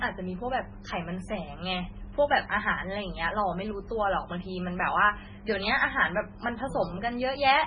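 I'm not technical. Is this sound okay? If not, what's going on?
No. The speech sounds watery and swirly throughout, with dull treble cut off near 10.3 kHz, likely from heavy MP3 compression discarding detail to save space.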